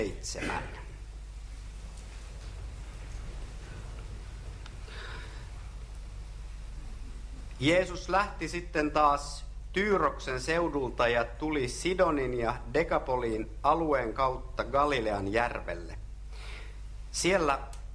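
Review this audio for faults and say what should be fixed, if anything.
No faults to fix; nothing in the audio needs correction.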